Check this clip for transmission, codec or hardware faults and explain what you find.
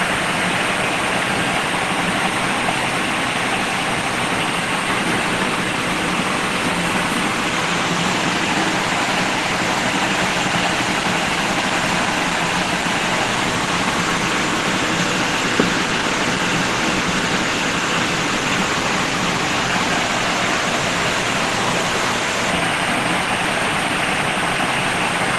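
Nothing stood out on listening to this clip.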